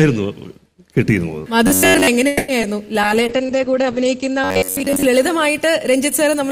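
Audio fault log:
1.67–2.07 s and 4.44–5.06 s, robotic sound from repeated short buffers: both stretches take on a rigid, metallic buzz locked at about 93.8 Hz. The likely cause is audio arriving too seldom, so the playback keeps looping a snippet of roughly 10.7 ms while fresh material is skipped; for most of each stretch the sound is such a repeat. Unlike concealment after a lost packet, the buzz holds one fixed pitch for the whole stretch instead of a brief smear.
2.27–2.50 s, call audio freeze: the sound stalls and its last moment is stretched into a fading continuation for 210 ms, without dropping to silence. This is likely a delivery hold-up that drained the jitter buffer. When audio resumes it continues exactly where it stopped, so nothing is lost and everything after it runs 210 ms late. That separates it from packet loss, where material disappears and the timing does not shift.
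2.62–2.65 s, short concealed packet loss: a momentary smear or wobble, shorter than the freeze just before it. About 20 ms of audio never arrived. The receiver patched about 10 ms by extending the preceding sound and then blended back into real audio, so a small slice of content is actually gone. The brevity and the missing material separate it from the freeze, and it has no fixed-pitch drone like the repeated-buffer fault.
3.03–6.17 s, call bitrate drop: the sound turns coarse and muffled as the encoder falls from 64 kbps to 10 kbps and stays at that floor for about 1.07 s. Bandwidth narrows from 20 kHz to 8 kHz, so the top end is lost and the fewer bits add a rough, watery grain. Unlike the brief glitches, this is a sustained change in tone colour across about three seconds, with no gaps or repeats, and it eases when the rate recovers.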